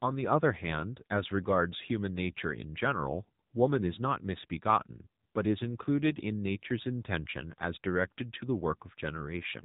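The clip is speech, and the whole of it carries the sound of the AMR narrowband mobile codec. Nothing above about 3.8 kHz survives. Codec damage is plainly audible as a buzzy, synthetic edge, which fits a low mode near 7.4 kbps.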